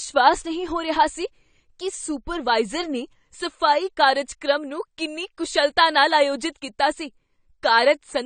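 It's a speech clip with AAC compression damage running the whole way through, and it's plainly audible. Nothing reaches above 9 kHz, so the top end feels shut off and the sound comes across dull and a bit smeared. That ceiling and texture point to an AAC-LC encode at a low bitrate, something around 32 kbps, where the encoder likely drops the highest frequencies and quantises what's left quite coarsely.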